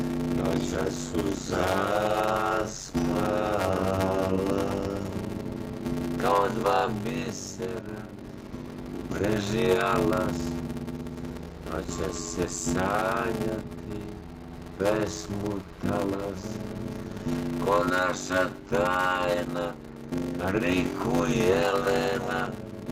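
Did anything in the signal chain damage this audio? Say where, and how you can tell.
Yes. The damage sits at the driver or buffer stage, and it runs through the whole clip. A steady buzz sits under the sound at about 93.8 Hz. The audio also plays at 0.625 times its proper speed, yet the pitch stays roughly normal. That points to a block size mismatch (padded). One stage writes short blocks. The next reads larger ones, which fits a 512-sample read. Zeros fill each gap, so a silence repeats every block.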